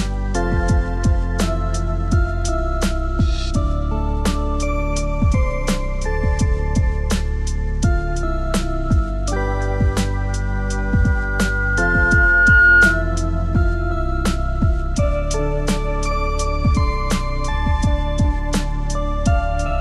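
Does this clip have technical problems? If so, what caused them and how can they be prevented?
Yes. A loudspeaker feedback squeal starts at 10.28 s and runs to 13.18 s: a single 1.4 kHz tone swells over roughly two seconds until it sits about 10 dB above the rest of the sound. A microphone was picking up the loudspeaker it fed, and at 1.4 kHz the loop gain exceeded one, so that frequency kept reinforcing itself. To prevent it, lower the gain or move the microphone away from the loudspeaker's coverage, and notch out 1.4 kHz if needed.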